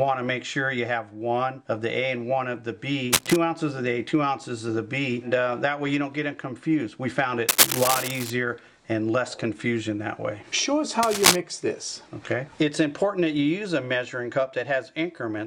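Three bursts of cable scratch noise break into this audio, at 3.12 to 3.36 s, 7.49 to 8.30 s and 11.03 to 11.36 s. Each is a dense, uneven rustle laid over the sound, roughly as loud as the audio itself in the first case and somewhat louder in the other two. The middle one runs longest, at about 0.8 s. The likely cause is a worn cable, connector or control carrying DC being moved, so its contact resistance jumps around rapidly.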